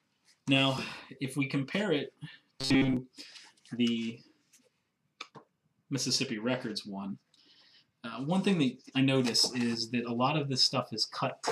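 From 2.61 to 2.97 s the audio takes on a robotic sound from repeated short buffers: a rigid, metallic buzz near 134 Hz. This likely comes from late-arriving audio being filled by looping a segment of about 7.5 ms, covering most of that stretch.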